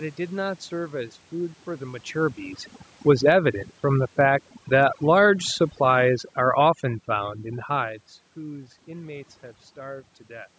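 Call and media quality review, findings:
Overdone noise removal, whole clip: background pulled down and broken into twinkly specks. Noise suppressor set too aggressive, clamping individual frequency bands near its noise estimate and taking the quieter bits of the voice down with them.

Automatic gain falling, 3.02 to 8.03 s: level sinks about 7 dB, speech and background together. AGC decided the input ran hot or its background noise too strong, and eased its gain back gradually over those five seconds. The separate level shifts around 2 s and 7.5 s are just the talker moving.

Automatic gain rising, 3.35 to 3.72 s: brief swell of about 3 dB, voice and background lifting as one. Same AGC briefly reading the input as too quiet and nudging gain up, inside the longer downward drift.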